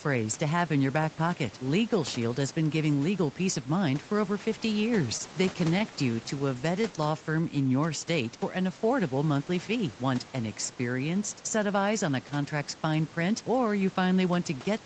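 Between 4.99 and 6.85 s there are scattered short gaps. Packets went missing or arrived late, about ten times across this stretch. Each hole was short, around 15 ms at most. The receiver filled each one by carrying the last sound forward, roughly 100 ms of patched audio in all, about 7% of the span. The fills also stretch the stretch by 30 ms. The speech stays clear, but brief ticks and small smears break through it.

From 6.88 to 7.69 s comes a jitter buffer slow-down, ending just before "your state for an". The buffer had run low and needed a reserve. To build it, the receiver repeated single pitch periods over and over. This added 79 ms, so the speech plays at about 92% speed. The pitch does not drop. Sounds are drawn out instead, and the pacing feels slightly dragged.

Between 9.71 and 10.19 s there is a jitter buffer speed-up. It sits between "for an affordable monthly" and "an experienced set of". 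Here the buffer held more audio than its target, so the receiver cut tiny pieces, one or a few pitch periods at a time. Roughly 50 ms was removed in total. The speech runs at about 110% speed with the pitch unchanged. It sounds briefly hurried.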